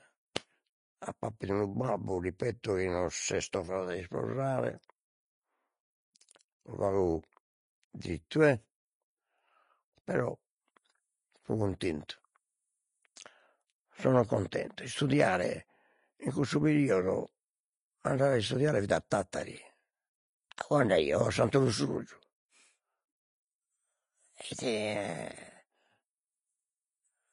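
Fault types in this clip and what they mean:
Vorbis compression: The treble is grainy and hissy throughout, with nothing above 10.5 kHz, likely from low-rate Vorbis coding, and the damage fits a bitrate near 24 kbps. A spectrogram shows a hard ceiling at 10.5 kHz and speckled, noisy texture replacing fine detail below it.
pre-echo: At about 13.16 s a brief hiss runs ahead of a sharp speech onset, spread over roughly 11 ms, because coding noise sized for the loud attack leaks into the quiet instant before it. The waveform shows a fuzzy lead-in before the onset.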